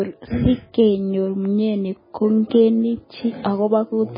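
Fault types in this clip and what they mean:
MP3 compression: The speech has nothing above 5 kHz and sounds muffled. Weak frequency detail flickers on and off between frames, giving a watery, swirling texture throughout. The heavy damage fits a very low bitrate near 16 kbps, likely from MP3 encoding.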